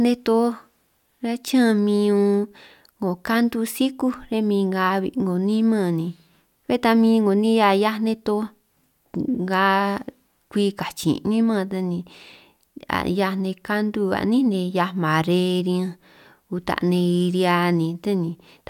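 Speech, with no audible faults.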